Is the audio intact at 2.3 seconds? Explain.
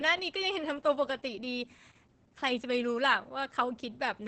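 No. At 2.3 seconds, as throughout the clip, Opus voice compression is starved of bits. Coarse SILK linear-prediction coding that fits roughly 10 kbps cuts everything above 8.8 kHz and roughens the excitation, so the speech sounds muffled, hoarse and slightly robotic.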